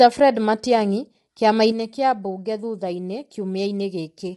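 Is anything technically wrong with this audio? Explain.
Yes, there are two faults. Throughout the clip the speech sounds rough and grainy, with a hiss-like fuzz between the harmonics and nothing above about 11.6 kHz. This points to low-delay AAC compression, likely AAC-ELD at around 32 kbps. Its very short frames cannot separate closely spaced pitch harmonics well, so at this bitrate the encoder smears noise into the gaps and cuts off the top band.

From 1.72 s to the end at 4.37 s, the level drops abruptly by about 6 dB and stays down. One channel drops out here, likely with the stereo signal then being summed to mono. Content shared by both channels loses half its contribution, which produces the sudden 6 dB dip, and anything present only in the lost channel disappears.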